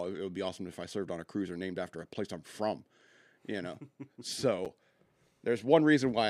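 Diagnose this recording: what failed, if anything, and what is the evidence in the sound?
A gap between chunks is what failed, most likely at the buffer or playback stage where the speech was handled in pieces. There's a single short hole at 4.65 s, about 7 ms of silence with hard edges on both sides, so the sound just stops and restarts. Nothing goes missing, and the flow is simply paused at a join. That points to audio stored or sent in chunks of about 2.5 s, with padding or a late start leaving dead air between two of them.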